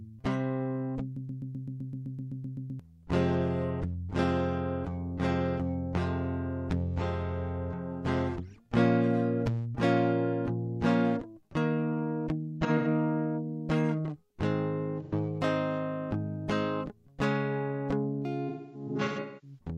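Music, with two faults. From 1.17 to 2.80 s a broken-record loop repeats one 128 ms fragment exactly, 13 times, likely from a stalled player resending its last buffer. AAC frame loss with concealment leaves smeared, phasey patches rather than exact repeats at 12.65–12.87 s, 15.03–15.13 s and 18.48–19.58 s. The last patch fades toward silence over a run of roughly 300 ms.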